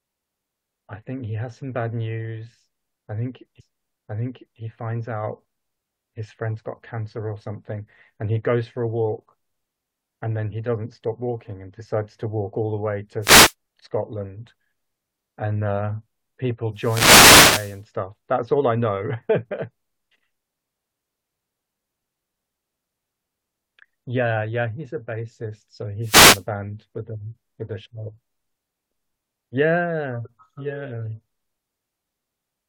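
At 3.59 s a stream segment repeated: about 1.0 s of the speech plays a second time after a small blip, an exact replay rather than a stutter or dropout. Wireless microphone noise hits follow at 13.20–13.54 s, 16.73–17.82 s and 26.00–26.45 s, where the radio signal fades and receiver hiss swells into a swish of static over the voice, unlike steady background noise.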